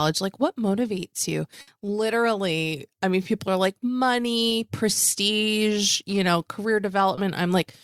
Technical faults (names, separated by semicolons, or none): burst of packet loss; short concealed packet loss